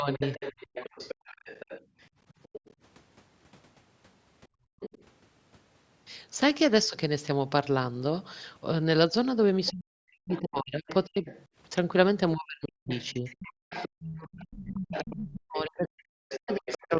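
A speech recording from a call shows three echo-canceller faults. From 0.13 to 2.74 s, 4.8 to 5.04 s and 9.66 to 16.97 s, a second voice sits behind the talker, about 15 dB below. This is the other side's voice leaking through. The far end is likely playing from a loudspeaker, and the canceller is not fully subtracting it from the microphone. The residue is heard on top of the main speech. At 0.0 to 0.21 s the talker dips by about 10 dB for roughly a tenth of a second. From 9.71 s to the end, the dips are much worse, reaching about 40 dB and adding up to around 4 s. This is speech suppressed in double talk. Both sides likely talk at once, and the canceller cannot tell the near voice from the echo, so it turns everything down. The talker's level drops while the leaked voice continues. The room sound also drops twice. At 1.85 to 1.97 s it falls by about 15 dB, and at 4.48 to 4.8 s by about 37 dB. 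This is background gated by the echo canceller, as the microphone is clamped down while the loudspeaker plays and then released.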